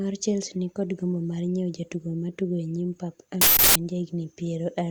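At 3.41 s, just after "nyim pap", an uninitialised buffer plays for about 0.34 s until 3.76 s: a block was sent to output before any audio was written into it, so stale memory was read as samples, producing a loud burst of digital noise. The length fits a 16384-sample block.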